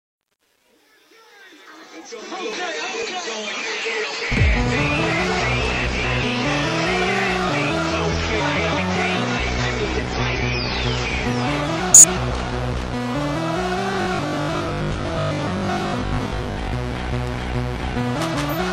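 From 0.00 to 2.56 s the fade-in shows truncation distortion, worst until 2.03 s. A level stage keeping only about 9 bits without dither turns the quiet start gritty.

Frames out of order occur at 3.84, 5.84, 8.39, 9.98 and 11.78 s. Each stretch of about 0.4 s plays its two 185.8 ms halves swapped, which points to four-frame blocks. The result is a garbled flutter.

From 13.93 to 16.73 s the sound becomes a rigid, metallic buzz at 50 Hz. This is robotic sound from repeated short buffers, likely caused by a 20 ms buffer being replayed in place of roughly half the real audio.

The same frame-order swaps return at 16.01 s, inside the buzz, and at 18.15 s.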